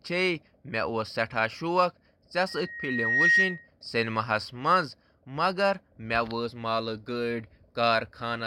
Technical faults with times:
2.48-3.68 loudspeaker feedback squeal

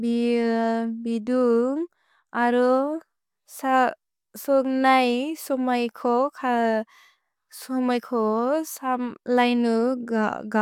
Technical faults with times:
none

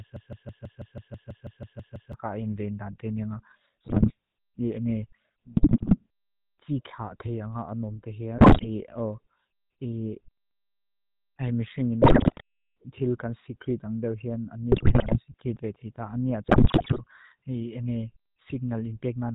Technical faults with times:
0.00-19.35 GSM full-rate codec
0.00-2.13 broken-record loop
3.84-4.12 GSM bit errors
5.54-6.01 GSM bit errors
8.38-8.68 GSM bit errors
12.02-12.41 GSM bit errors
14.72-15.33 GSM bit errors
16.46-17.01 GSM bit errors

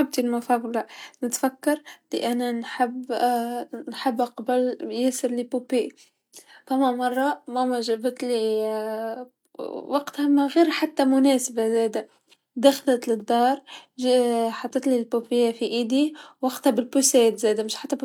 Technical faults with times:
none

